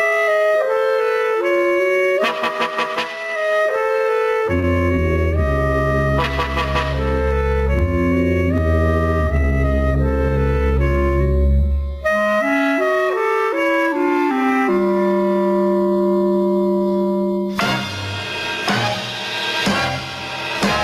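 The audio pumps throughout, with the level swinging by roughly 25 dB. This is gain pumping, most likely from input gain set far too high and a fast limiter or compressor hauling it back on each peak, which squashes loud and soft passages together. On a waveform the envelope looks flattened, and the noise floor rises visibly between peaks. On a spectrogram the broadband background brightens in the gaps and darkens where loud events start. At 4.59 to 4.66 s there is a short stall from a late packet: the jitter buffer ran dry, and the receiver stretched the last sound for about 44 ms until the packet arrived, then carried on with nothing lost. It is heard as a briefly held sound with a slight buzz or dip. A spectrogram shows horizontally smeared, frozen partials over that span, and the waveform shows a repeated, periodic stretch where it would normally keep evolving.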